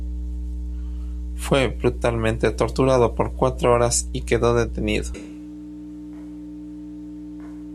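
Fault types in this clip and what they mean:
Mains hum: A steady low tone at 60 Hz runs under the speech from start to finish, which points to a ground loop or a nearby transformer coupling the power line into the signal path. It is strong, sitting only about 10 dB below the speech, so it stays audible through every pause and also thickens the low end while the speech is present. Some low harmonics come with the tone.
Switch to a distant microphone: At 5.15 s, right after "horas y quedó detenido", the speech abruptly turns roomy and hollow, with thinner bass. The level drops by roughly 10 dB and a wash of room noise rises to about 25 dB below the speech. The change is instant and holds to the end of the clip, with no return to the close sound. The likely cause is that the close microphone's feed dropped out and a mic further away took over.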